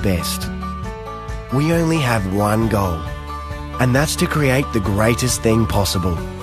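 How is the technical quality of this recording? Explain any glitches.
One playback fault stands out early on. At 0.44 to 0.48 s, compressed frames are skipped: the decoder drops whole frames that are missing or rejected as corrupt, so about 20 ms of audio never plays. The audio jumps ahead by that length at the join.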